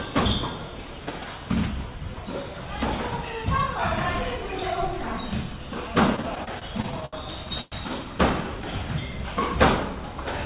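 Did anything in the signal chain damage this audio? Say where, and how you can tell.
Yes. Between 6.16 and 7.16 s there are repeated stalls (stutter) at the network and jitter-buffer stage. Nine short gaps, the longest 73 ms, covering about a fifth of that second, are bridged by the receiver repeating the last sound. On a waveform the bursts are stretched, and a spectrogram shows smeared, repeated columns.

At 7.61 to 7.75 s a call audio freeze fills 106 ms with a continued, fading copy of the preceding sound. Nothing drops to silence, and the audio then resumes where it stopped. The likely cause is a network delay that emptied the jitter buffer. This appears as a flat, decaying band on the spectrogram.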